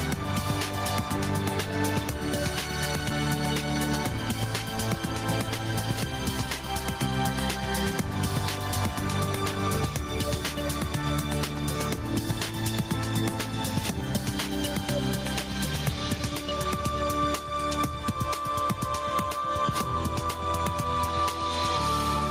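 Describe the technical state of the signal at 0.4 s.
At 0.4 s the signal shows gain pumping, present throughout the clip: the level is pulled down on loud sounds, bringing loud and soft parts closer together and squashing the sound, a swing of around 5 dB. The likely cause is excessive input gain tamed by a fast limiter. Unlike a noise gate, the background never drops to silence.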